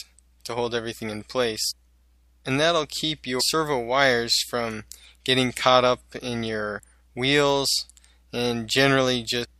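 Brief blips cut into the sound at 1.70 to 1.72 s, at 3.39 s, and at 9.43 to 9.45 s. These come from damaged data in a compressed stream: corrupted bytes make the decoder misread frames, lose sync and hunt for the next valid frame header.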